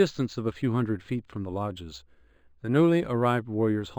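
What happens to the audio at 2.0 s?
At 2.0 s the clip is affected by imaging from linear upsampling, which runs through the whole recording. The rate was raised by straight-line interpolation between samples, consistent with a jump from roughly 11 kHz to 48 kHz. That crude filter dulls the top of the speech band, and a mirrored copy of the spectrum survives between 5.5 kHz and 11 kHz, around 35 dB below the speech. It adds a faint metallic shimmer to sibilants.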